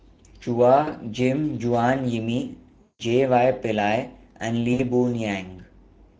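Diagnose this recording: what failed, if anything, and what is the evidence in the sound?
The codec stage has failed: Speex coding audibly damages the whole speech clip, leaving it hoarse and grainy, consistent with a mid-rate mode near 16.8 kbps. A spectrogram shows smeared harmonics and a diffuse noise-like fill above 4 kHz instead of crisp detail.

On the network side, there is VoIP packet loss concealed by the speech codec at 0.81–0.90 s, 2.83–3.02 s and 4.73–4.81 s, covering about 60, 160 and 60 ms of missing audio. In each gap the decoder extends its last pitch and filter into a buzzy tone or coloured noise that fades. The waveform shows a decaying envelope, and the spectrogram shows frozen, repeated harmonics.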